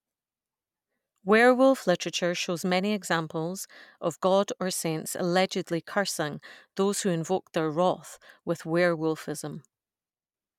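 No technical faults can be heard anywhere in the recording.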